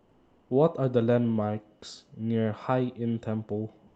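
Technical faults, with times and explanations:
0.00 to 0.49 s and 3.87 to 3.96 s, comfort noise in place of the background: the sender likely paused transmission during silence, which points to Opus discontinuous transmission, and the receiver filled the gaps with synthetic noise. The real background, about 39 dB and 36 dB below the loudest sound, becomes a steady, featureless hiss, about 2 dB and 4 dB quieter respectively.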